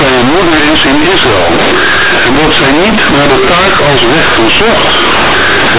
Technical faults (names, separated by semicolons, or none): companded audio read as linear